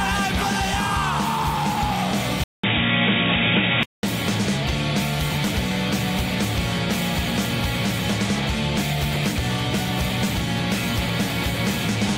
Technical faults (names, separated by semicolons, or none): input switched to a poorer device